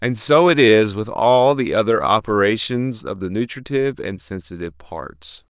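No technical faults can be heard in this recording.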